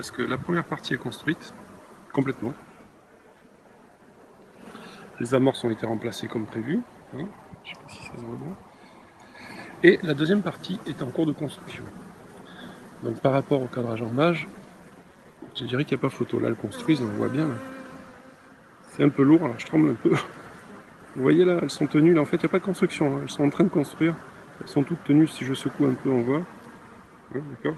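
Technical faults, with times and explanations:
Nothing here stands out as a technical problem; the sound just carries the usual character of an Opus call path, with the top end rolling off around 12 kHz.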